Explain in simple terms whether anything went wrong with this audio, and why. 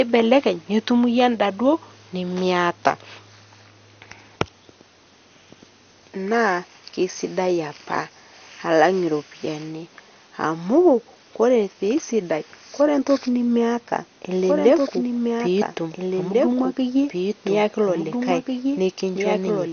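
MP2 compression, throughout the whole clip: the speech sounds dull and plainly gurgly, with nothing above about 6.5 kHz. This is likely a low-quality MP2 encoding, which saves space by switching off the higher parts of the sound and roughly approximating what remains.

Doubled audio track, from 14.31 s to the end: a second, somewhat quieter copy of the speech runs about 1.5 seconds behind the first. It starts abruptly and has no room echo, likely because the same audio was mixed in twice out of step.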